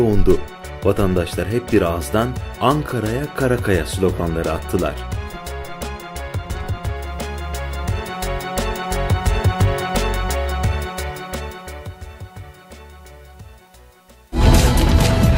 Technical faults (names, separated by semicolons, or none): none